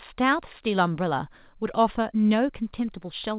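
No technical faults are audible.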